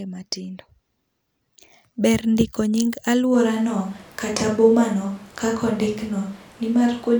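At 3.35 s the speech likely loses its close microphone, and from there to the end the recording is carried by a microphone further from the talker, a switch to a distant microphone. The change is abrupt: the voice turns roomy and hollow, with thinner bass, while its loudness stays about the same. More room noise sits underneath, roughly 25 dB below the speech, and the close sound never returns.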